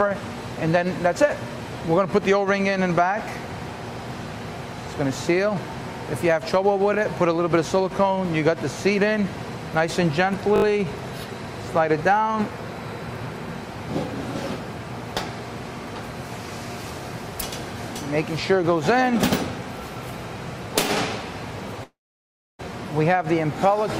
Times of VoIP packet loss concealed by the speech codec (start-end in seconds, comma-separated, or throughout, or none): none